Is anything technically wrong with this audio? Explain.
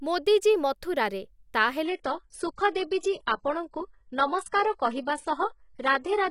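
Yes. From 1.85 s, right after "ମୋଦୀ ଜୀ ମଥୁରାରେ ତା", the speech abruptly loses its crispness: nothing is left above 11.1 kHz, the upper range takes on a synthetic texture, and compression artefacts rise until the clip ends, with no gap at the switch. This is an adaptive stream at a lower bitrate. The player dropped to a leaner encoding when the connection slowed, and the sound points to a step from about 96 kbit/s AAC down to roughly 12 kbit/s HE-AAC.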